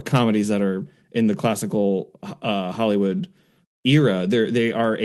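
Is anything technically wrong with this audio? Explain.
No, no technical faults heard.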